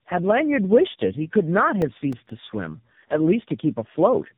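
From start to finish the call shows tandem speech coding: it passed through several speech coders in a row, each decoding and re-encoding what the previous one had already degraded. The sound points to a low-rate AMR-NB link at each end with higher-rate stages, likely including CVSD, in between. The losses stack, so the speech is rough, muffled and warbly, with nothing above 3.8 kHz.

From 1.82 to 2.30 s, processor overload crackle appears. The processor fell behind and missed several deadlines in a row on very short buffers of around a millisecond and a half. Each missed buffer came out as silence, leaving a tiny hard-edged gap. The gaps run together into a burst of gritty crackle riding on the speech, and it stops once the load eases.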